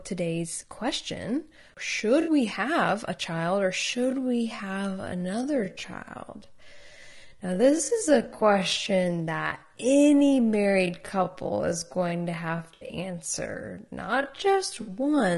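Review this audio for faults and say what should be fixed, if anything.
Low-delay AAC compression runs throughout: the speech sounds rough and grainy, with noise between harmonics and a thin top band, likely AAC-ELD near 32 kbps. Prevent it by encoding at a higher bitrate.

AAC frame loss with concealment at 2.21–2.31 s, 8.73–8.76 s, 12.73–12.95 s (scattered gaps, longest about 70 ms) and 14.81–14.91 s: the decoder fills gaps from the last spectrum, leaving smeared, noisy patches. Prevent it with error-resilient transport or retransmission.

A time-stretched section runs from 3.80 s to the end, slowed to about 0.58 times speed with pitch held, so the speech drags, likely from length-fitting software. Prevent it by not stretching to fit a duration.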